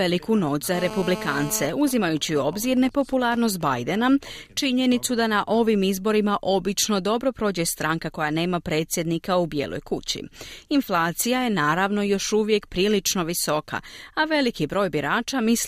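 From 0.74 to 1.67 s a GSM phone buzz sits about 10 dB below the speech: a steady, raspy 217 Hz rasp, harsher than mains hum, from rectified call transmissions. From 1.69 to 3.74 s it gives way to GSM signalling bursts, a much quieter pattern of even ticks with a longer buzz twice a second, sent while the caller stays silent.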